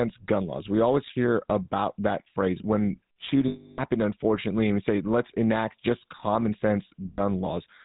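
All the way through, the speech has the buzzy, gravelly roughness of the GSM full-rate codec, and the damage is plainly audible. The coder models the vocal tract, drives it with sparse, regularly spaced pulses and passes nothing above 4 kHz, which fits the 13 kbps full-rate coder.

Then there are lost GSM frames. From 3.48 to 3.80 s, between "about that phrase when" and "unfortunately and we say", roughly 0.3 s of audio is missing, and the decoder fills the gap by repeating the last good frame's settings, so you hear a rough, metallic ring held over the gap. The same thing happens more briefly from 7.12 to 7.20 s, for about 80 ms.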